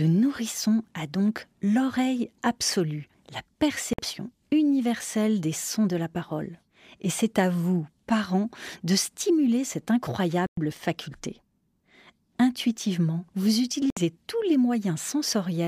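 French speech breaks into brief silences at 3.93 s (51 ms, after "donc l'oreille absolue la"), 10.46 s (109 ms, after "parents de stimuler cette") and 13.90 s (65 ms, before "tous les"). These are likely Bluetooth stalls from a drained headphone buffer: audio resumes where it stopped or slightly later, unlike an edit cut, which drops material.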